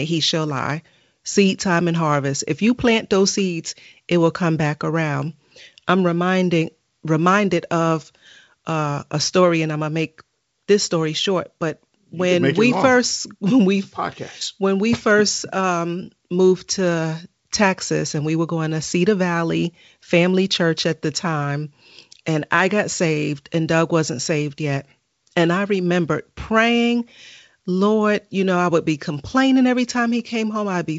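Speech over G.722 wideband coding; nothing technically wrong.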